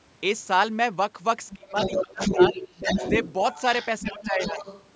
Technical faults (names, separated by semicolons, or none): other side's voice leaking through; speech suppressed in double talk